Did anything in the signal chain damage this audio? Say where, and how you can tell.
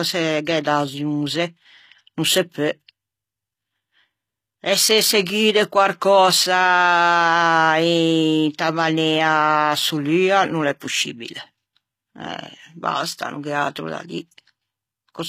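Yes, at the codec stage, throughout the speech: the s sounds turn gritty and metallic, and nothing reaches past 14.9 kHz. The treble reaches high but is rebuilt from copied lower bands, not merely cut as by a plain low-pass, so HE-AAC compression, which fits a bitrate around 20 kbps, is the likely cause.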